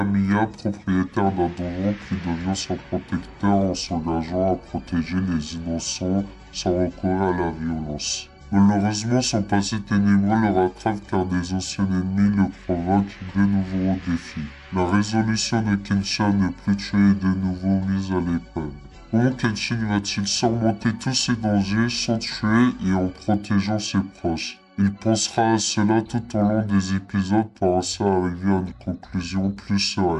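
Throughout, a wrong sample rate slows everything to about 0.73× speed and drops pitch about 5.6 semitones, which fits 44.1 kHz audio played at 32 kHz. Spectrograms show frequencies compressed downward and events stretched.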